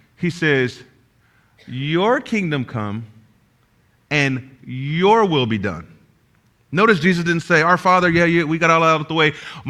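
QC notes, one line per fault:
No faults found; nothing to log on this speech clip.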